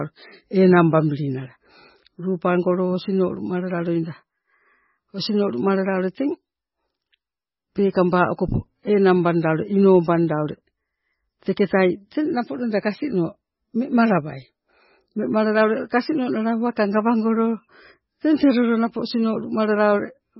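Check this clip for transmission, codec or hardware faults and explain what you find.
One fault runs through the whole speech recording: heavy MP3 compression. The treble stops dead at 5.6 kHz, and the remaining band has a watery, swirling texture, with chirpy metallic edges on s sounds and blurred consonant onsets. The likely cause is an encoder starved of bits, which fits a very low bitrate of about 16 kbps. It cuts the top band and lets weak frequency lines flicker on and off between frames. A simple low-pass filter would dull the sound just as cleanly but leave no swirl or chirp.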